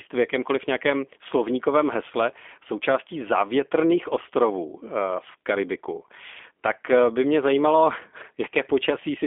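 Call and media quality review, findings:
G.729 codec damage, whole clip. Speech sounds rough and a bit synthetic, clearly audible. Band sits around 250 Hz to 3.5 kHz, nothing above 3.6 kHz. Probable component: G.729A encoder on the VoIP leg, which fits an 8 kbit/s narrowband path. Mechanism: speech rebuilt from a vocal tract filter, pitch predictor and a few pulses per frame, so fine detail is lost.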